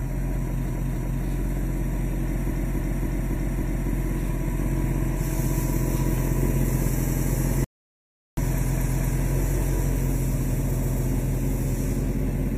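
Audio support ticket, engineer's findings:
Repeated frames: stutter at 0.65–1.21 s, 2.47–3.86 s, 6.97–7.25 s, 8.64–9.11 s and 10.73–11.01 s. Encoder/transport resent compressed frames. Block of 0.09–0.28 s replays two to five extra times, adds time instead of losing it.

Audio dropout to silence: 7.64–8.37 s, about 0.73 s of silence, no room tone, sound cut mid-flow. Likely input loss (disconnect, failed link or mute) while silence kept being written. Unlike repeated frames, nothing replays.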